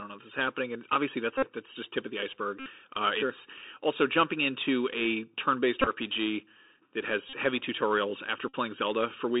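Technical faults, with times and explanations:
throughout, Bluetooth CVSD headset codec: narrow, phone-like speech limited to about 300 Hz to 3.7 kHz, with a granular hiss underneath and scratchy s sounds. The one-bit, 64 kbps delta coding's adaptive step cannot keep up with loud high-frequency detail.
1.38–1.49 s, 2.60–2.68 s, 5.81–5.88 s, 7.29–7.36 s, 8.49–8.55 s, Bluetooth headset packet repeated: short, steady buzzes near 267 Hz. Lost voice packets were replaced by the previous packet decoded again every 3.75 ms. About 49, 64, 34, 38 and 49 ms went missing, and the 5.81 s loss was scattered over about 53 ms, with the longest run around 20 ms.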